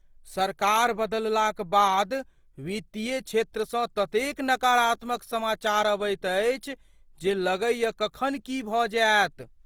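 Opus compression runs through the whole clip. The speech sounds grainy and rough, with a noisy texture. The damage is plainly audible. It likely comes from the music (CELT) mode, filling lost detail with noise, which fits about 24 kbps. Bandwidth reaches about 20.2 kHz.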